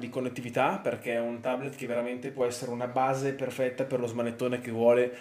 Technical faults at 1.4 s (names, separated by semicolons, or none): channel delay (comb filtering)